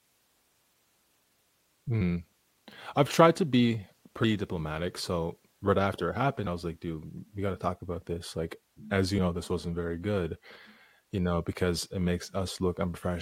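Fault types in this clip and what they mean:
Damaged data in a compressed stream: Two brief glitches, each about 18 ms, cut into the speech at 4.23 s, between "I've tried to be" and "diplomatic so right after", and at 6.46 s, between "so right after it" and "I was like". Corrupted bytes in the encoded stream make the decoder misread those frames, lose sync, and jump to the next valid frame header.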